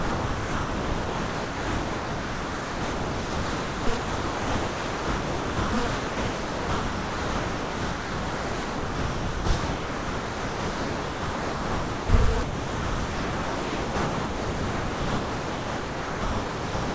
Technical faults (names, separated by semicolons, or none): sound dropped by the voice detector